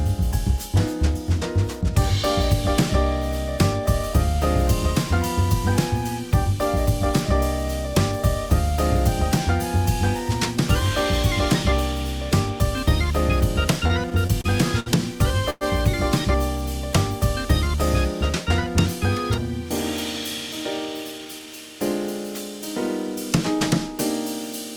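Between 13.87 and 14.89 s there are repeated stalls (stutter). Packets kept arriving later than they were needed, so the receiver's jitter buffer ran dry five times in about a second. Each time, the receiver stretched the last bit of sound to cover the wait: 147 ms in all, roughly 14% of that stretch, with the longest gap 60 ms. Nothing is lost, but the sound catches and drags in small, uneven hitches.

At 15.50 s comes a brief call audio freeze. The likely cause is packets held up in transit long enough to empty the jitter buffer, adding 108 ms of delay. For about 108 ms, up to 15.64 s, the final sound is held and carried on as a short sustained smear rather than dropping to silence. The audio then resumes exactly where it stopped, so the pause has been inserted and no content is missing.

From 21.11 to 21.47 s there is a jitter buffer speed-up. The buffer had built up more audio than its target, probably after delayed packets arrived in a bunch. 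To shed that excess delay, the receiver cut out many tiny pitch-period-sized slices, about 70 ms in total. For that third of a second the sound plays at 117% speed with its pitch unchanged, so it comes across as briefly rushed or clipped along.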